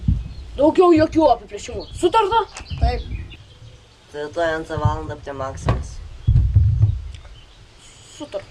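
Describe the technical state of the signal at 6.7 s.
At 6.7 s the signal is intact, with no audible technical fault at that moment.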